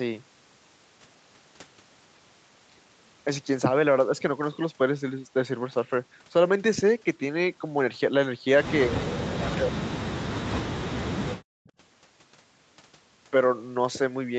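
A speech recording from a call, with audio reaching up to 8 kHz. From 9.03 to 9.58 s a delayed copy of the speech can be heard, trailing by 255 ms at about 15 dB below the voice. A fainter scrap returns at 11.66 to 11.71 s, roughly 35 dB down. This is echo leak, likely from a far-end echo canceller letting loudspeaker pickup through. At 9.59 to 10.08 s and 10.53 to 11.63 s, the speech drops by up to roughly 40 dB, for about half a second and then about a second. This is speech suppressed in double talk. The echo canceller likely mistook overlapping talk for echo and turned it down.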